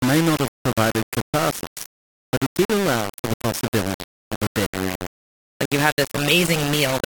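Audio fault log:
Throughout: low bit depth without dither. The speech sounds harsh and grainy, with a gritty buzz that tracks every syllable and sits only a few dB under it, and the quietest tails sputter or cut out. That points to likely rounding to about 4 bits.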